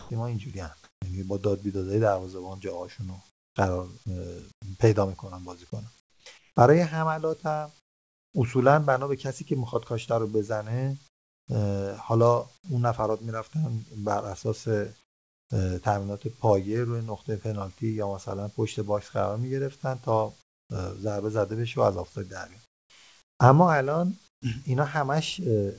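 At the very start, 0.0 to 0.10 s, the speech gives way to steady, even noise, and about 40 ms of real sound is simply missing. This is sound dropped by the voice detector. The likely cause is that the sender's detector judged that opening as background and stopped transmitting. The receiver then played generated noise until the detector triggered again.

Over 0.0 to 1.02 s, about 280 ms of the pauses carry a flat, featureless hiss instead of the room's textured background. The same swap returns from 3.30 to 8.34 s, covering about 1.3 s of the gaps. This is comfort noise in place of the background. It likely comes from discontinuous transmission: the sender goes quiet when it hears no speech, and the receiver synthesises noise roughly matched to the background, which loses the real detail.

Inside that stretch, at 6.24 s, a sound starts abruptly with its soft beginning shaved off by about 20 ms. 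This is an onset clipped by the voice detector. The likely cause is that the detector reacted late, so those first moments were never sent and generated noise filled them.

Comfort noise appears again at 11.08 to 11.48 s and at 15.04 to 15.50 s. Both times the gap drops noticeably, by about 23 dB and about 24 dB. The real background there sits about 36 dB and about 40 dB below the loudest speech, and the substitute noise is much quieter than it. From 20.42 to 24.42 s, about 840 ms of the pauses are again smooth, artificial noise, likely from the same mechanism.

Throughout, nothing is heard above 8 kHz, which fits a G.722 call codec running at 64 kbps.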